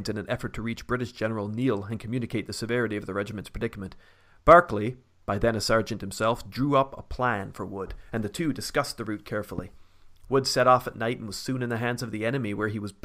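At 9.58 to 9.61 s, just after "two discussed the route", a single loud pop lands on the speech, which carries on beneath it, likely from an electrical pulse such as a switch or static. It shows as a narrow spike about 10 dB above the speech, a thin vertical stripe across all frequencies.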